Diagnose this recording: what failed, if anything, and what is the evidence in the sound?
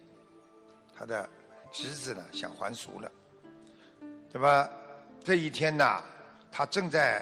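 Hard clipping occurs at a level-limited stage, the converter or a fixed-point format, in three bursts: 4.45–4.60 s, 5.33–5.86 s and 6.99–7.08 s, overdriven by about 4, 5 and 2 dB. Flattened peaks add high harmonics, heard as crackling fuzz on loud moments.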